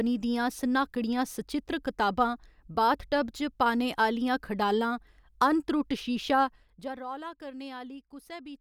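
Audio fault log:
6.44–7.04 s: zipper noise. Just after "अनत्रुट्ट शीशा" the speech level drops by around 15 dB in 1 dB steps at roughly 30 per second, each unsmoothed step clicking, so a fine ticking rides the fade. Waveform: staircase envelope; spectrogram: evenly spaced faint vertical broadband lines.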